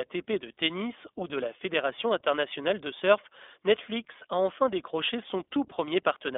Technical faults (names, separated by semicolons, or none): iLBC codec